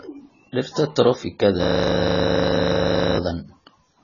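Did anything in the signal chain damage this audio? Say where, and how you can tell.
Yes. The whole clip is dull, with nothing above 7 kHz and heavy smeared damage across the speech. The likely cause is AAC compression at the codec stage, which points to a very low bitrate. A simple low-pass filter would only remove the top end. It would not add this blurring and quantisation texture.

From 1.64 to 3.17 s a system hang loop takes over at the driver or buffer stage. One 40 ms piece of audio repeats exactly, 38 times, making a steady 25 Hz machine-gun stutter. Network concealment would vary and fade. These repeats stay identical because the hardware kept cycling its ring buffer while the host was frozen.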